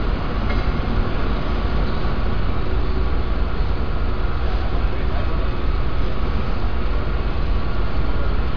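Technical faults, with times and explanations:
No technical faults can be heard anywhere in this audio.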